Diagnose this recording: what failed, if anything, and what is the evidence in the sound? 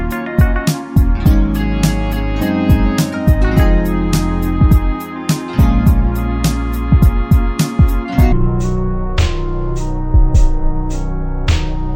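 Stereo read as mono at the sample-format conversion stage: interleaved left and right samples run as one channel, so from 8.32 s the audio plays at half speed, an octave low.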